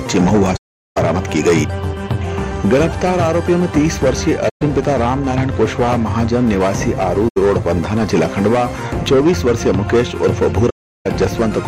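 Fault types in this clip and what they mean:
AAC frame loss with muting: the decoder received nothing for a stretch of frames and zeroed their spectrum, so the audio simply vanishes for about 0.41 s at 0.56 s, 0.13 s at 4.49 s, 0.09 s at 7.28 s and 0.36 s at 10.69 s. The overlapping windows fade each hole out and back in over about one frame, so the edges are soft, unlike a hard sample dropout. Nothing is repeated or smeared into the gap, as concealment would do.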